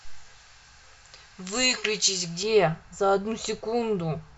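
From the start of the clip to 2.43 s, pre-emphasis was left on. The treble lift applied ahead of recording or transmission, matching a J.17-style curve, never got its complementary de-emphasis at the receiving end. Top frequencies therefore stand about 11 dB higher at 10 kHz than at 1 kHz. The speech in that stretch sounds thin and overly bright, with sibilants that hiss and cut sharply before the balance settles.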